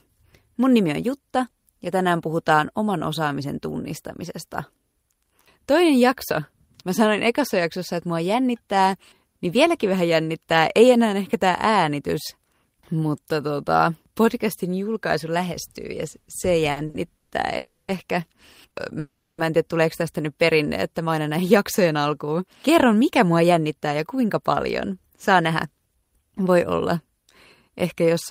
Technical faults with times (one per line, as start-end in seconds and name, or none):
16.71-17.33 repeated stalls (stutter)
17.57-17.90 call audio freeze
18.68-18.73 short stall from a late packet
18.99-19.40 call audio freeze
21.06-26.02 jitter buffer speed-up